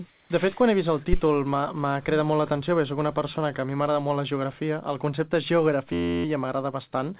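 From 0.1 to 0.3 s, the 200 ms of background are replaced by a smooth, featureless hiss about 4 dB quieter than the real background, which sits about 36 dB below the loud passages. This is likely comfort noise in place of the background: the sending side stopped transmitting during the pause, and the receiver filled the gap with synthetic noise matching only the rough spectrum of the room. The background's fine texture is missing for that stretch.

At 1.13 s, a phantom power thump appears as a short low-frequency knock lasting until about 1.21 s, with a decay of about 18 ms. A supply was switched on a live input, and the sudden DC step passed through the coupling capacitors as a single deep pulse. It is brief and sounds like a deep bump on the line.

From 5.93 to 6.25 s, a system hang loop turns the sound into a steady buzz. The machine stalled while the audio hardware kept replaying one 11.61 ms segment of its ring buffer, which fits a 512-sample buffer. 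That segment repeats 27 times at a rate of 86.1 Hz, fast enough to be heard as a pitched drone rather than a stutter. Essentially no audio is lost, because the sound resumes where the loop began. Throughout the clip, nothing above 4 kHz is heard, consistent with a G.711 call path.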